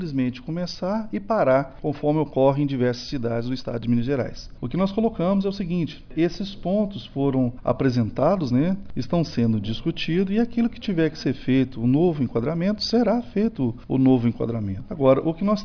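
No technical faults are audible.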